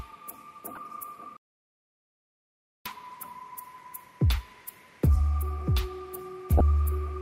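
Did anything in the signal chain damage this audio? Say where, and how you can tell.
Yes. A corrupt frame decoded at 0.75–0.78 s and again at 6.58–6.61 s, in the codec stage. Each is a short burst of misplaced energy, the first faint at about -30 dBFS, the second far louder at about -10 dBFS. Flipped bits in a handful of compressed frames gave wrong gains and codes, and the decoder played them anyway.

An audio dropout to silence runs from 1.37 to 2.85 s, about 1.5 s. The sound cuts off mid-flow to silence with no room tone, then resumes abruptly. The likely cause is a lost input at the device or link while the recorder kept writing silence.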